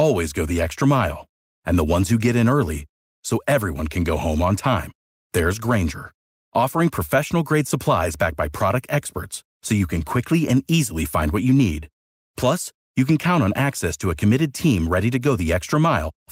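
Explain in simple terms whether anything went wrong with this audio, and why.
Nothing went wrong: the speech recording shows no audible technical faults anywhere.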